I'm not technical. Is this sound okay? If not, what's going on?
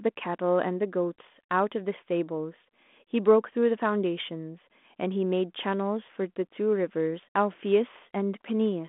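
Yes, nothing here is broken. The speech has the narrow, slightly thin sound of a phone line because it passes through G.726 ADPCM, the coding used by cordless home phones, and that leaves only a faint trace of its own.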